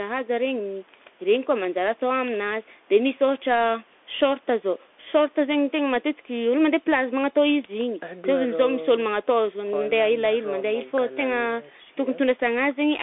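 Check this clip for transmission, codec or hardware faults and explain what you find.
One fault runs through the whole clip: the speech has travelled over a Bluetooth CVSD headset codec. Each sample is coded as a single up-or-down bit with an adapting step, which fits a 64 kbps stream. The sound sits between 250 Hz and 3.5 kHz, with nothing above 3.8 kHz. Loud high sounds outrun the step and distort, s sounds turn scratchy, and a granular hiss lies plainly under the speech.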